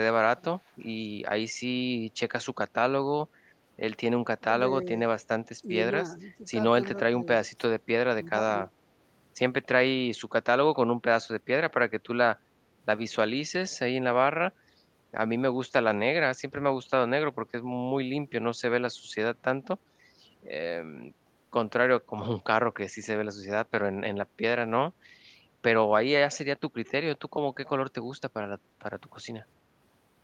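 From 0.66 to 0.87 s a faint delayed copy of the speech trails the original by about 363 ms, sitting very low, roughly 40 dB under the direct sound. This is an echo leak, likely from a far-end loudspeaker whose echo canceller let residual pickup return down the line. Unlike room reverberation, which smears continuously onto the tail of each sound, this is a distinct, later repeat separated from its source by a clear gap.

The speech suppressed in double talk comes in three dips, likely caused by an echo canceller that could not separate the local talker from loudspeaker echo while both sides spoke, and so ducked everything. The deepest runs from 4.39 to 4.52 s, where the level falls by around 20 dB. Briefer, shallower dips of about 5 dB follow from 4.84 to 4.89 s and from 6.16 to 6.42 s. Unlike packet-loss dropouts, these are level reductions applied by the echo canceller.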